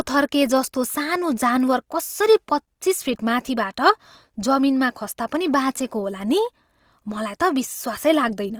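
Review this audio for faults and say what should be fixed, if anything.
Throughout, the speech sounds grainy and rough, its fine detail replaced by noise-like fill. That is likely Opus compression, fitting a rate near 24 kbps. Encode at a higher bitrate, or work from an uncompressed master.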